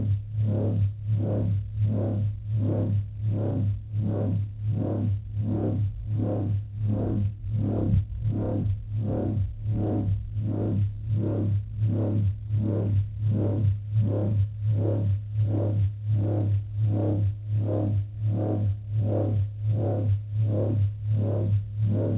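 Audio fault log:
12.48 s, short concealed packet loss: about 10 ms of audio failed to reach the decoder in time. The receiver covered the gap by extending the preceding sound, continuing its pitch if it was tonal or shaping noise to match if not, then crossfaded back into the real signal. The result is a brief smear or wobble in the sound, heard within a band that stops at 4 kHz, as expected from a G.711-style call path.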